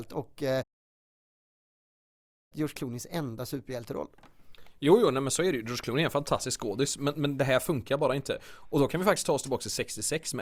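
A speech clip in which the sound cuts out shortly after "och eh" at 0.62 s and stays silent until 2.53 s, a gap of about 1.88 s in mid-flow before the speech picks up again. This is a playback stall, likely caused by the player running out of buffered data or its playback thread being blocked. The output then goes silent until it recovers, resuming either where it left off or, for a live stream, at a later point.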